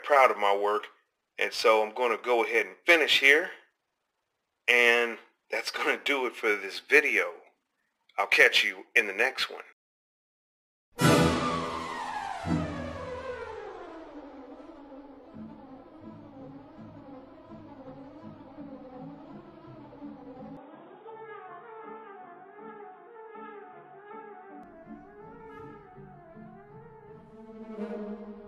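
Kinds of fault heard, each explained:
Input switched to a poorer device: From 20.57 to 24.63 s the sound turns dull, with nothing above 3.8 kHz. The switch is seamless, with no gap or level jump. A faint new noise floor appears. A narrower input device is the likely cause.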